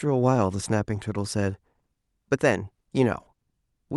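No technical faults are audible.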